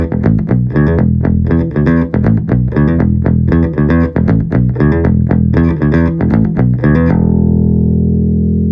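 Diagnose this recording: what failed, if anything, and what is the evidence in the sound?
Nothing in the signal chain audibly failed: the audio stays continuous, at a steady level and with an intact frequency balance from the first moment to the last, with no stage of capture, conversion, transmission or playback leaving a mark on the sound.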